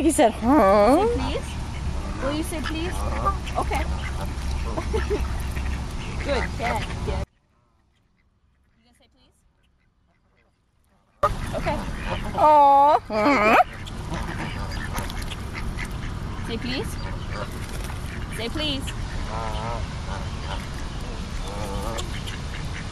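At 7.24 s the sound cuts out abruptly, an audio dropout to a faint residue lasting about 4.0 s until 11.23 s. The wanted signal was likely lost upstream while the path after the break stayed live, so the gap keeps a faint leak of the sound about 35 dB below its normal level. On a waveform the envelope collapses to a thin sliver with square edges, and a spectrogram shows a sharp-sided, nearly empty band.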